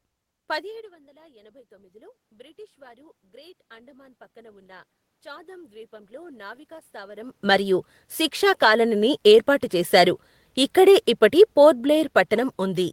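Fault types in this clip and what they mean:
Automatic gain rising: after the talker moves back near 0.5 s and the input drops by about 21 dB, the gain climbs slowly by about 15 dB until 7.77 s, before "శిక్షా కాలనీని ఏర్పాటు చేశారు", lifting room noise along with the voice.
Automatic gain falling: from 10.79 s to the end, the sound sinks gradually, the room noise sinking with it. A talker moving away would lower only the voice and leave the background steady.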